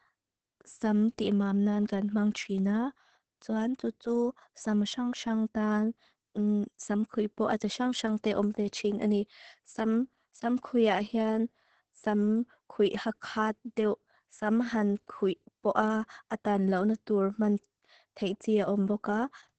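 From start to finish the speech carries Opus voice compression, and heavy at that: nothing survives above about 8.6 kHz, so it's muffled, and the coarse SILK excitation coding leaves it hoarse and a bit robotic, which fits a bitrate down around 10 kbps.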